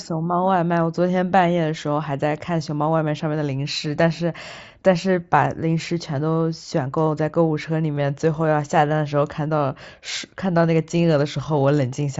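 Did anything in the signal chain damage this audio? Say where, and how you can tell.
Yes: concealed Bluetooth headset packet loss on the wireless link at 6.70 s and 7.96 s. Each 15 ms gap is refilled with recent waveform, leaving repeated cycles and a spectrogram seam.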